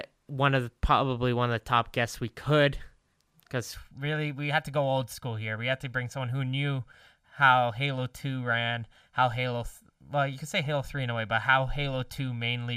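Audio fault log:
3.74 s to the end of the clip: channel delay (comb filtering). From this point one channel arrives roughly 1.5 ms behind the other, and the pair is folded down to mono. Content shared by both channels then partly cancels at a row of evenly spaced frequencies, beginning somewhere around 400 Hz. Those fixed notches hollow out the spectrum, leaving the audio sounding thin and phasey.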